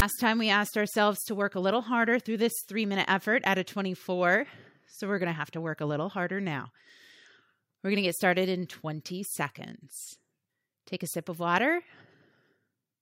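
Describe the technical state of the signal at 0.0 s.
At 0.0 s a brief, harsh rasp bursts out with hard edges, lopsided as if pushed off-centre, and collapses straight into dead silence, all within about 16 ms before the speech begins. This is file tags played as audio: a block of text metadata at the head of the file is being decoded as sample values. The character bytes produce the offset rasp, and the zero padding that follows plays back as silence.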